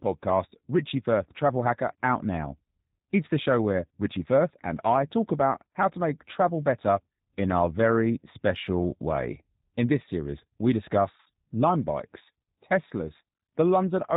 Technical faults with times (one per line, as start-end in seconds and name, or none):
0.00-14.16 G.729 codec
11.20-11.28 VoIP packet loss concealed by the speech codec